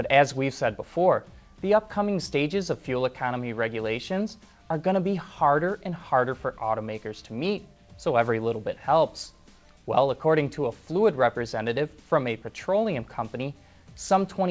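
No technical faults are audible; the sound has come through a call path with nothing above 8 kHz, which fits a wideband codec such as G.722 at 64 kbps.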